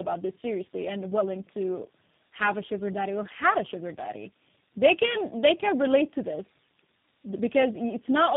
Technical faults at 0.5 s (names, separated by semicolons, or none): tandem speech coding